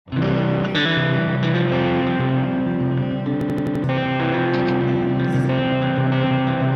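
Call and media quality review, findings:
System hang loop, 3.41–3.84 s: identical 85 ms slice repeats five times, a machine-gun stutter at 11.7 Hz, roughly 0.4 s of audio lost. Host or driver stall with hardware replaying one ring buffer, consistent with 4096 samples. Exact repeats, not concealment smearing or silent dropout.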